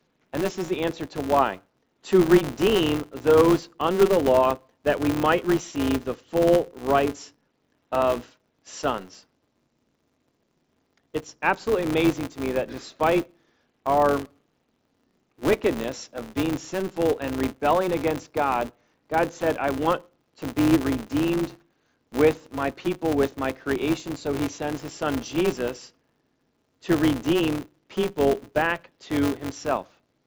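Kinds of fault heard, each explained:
Filter restarted on every block: a filter in the chain loses its memory at each block boundary and starts from silence, so every block opens with a small transient. Here the transients repeat at 188 Hz, which fits a 256-sample block, giving a steady buzz throughout that rises and falls with the speech level. Unlike mains hum, its pitch follows the block rate and it fades in pauses, and it sits below the 8 kHz band limit of the headset link.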